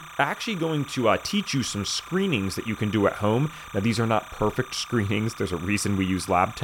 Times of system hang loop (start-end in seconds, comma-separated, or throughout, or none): none